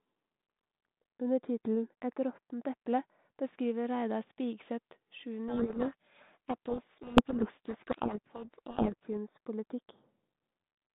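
From 5.48 to 9.07 s there's a codec payload misread: the speech gets buried in harsh, grinding distortion, which points to the two ends packing the G.726 code words in opposite bit order, so the decoder rebuilds nonsense samples until both agree again. The 32 kbit/s G.726 itself only adds light coding roughness.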